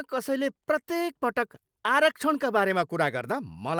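Nothing stood out as a technical problem on listening to this short speech recording.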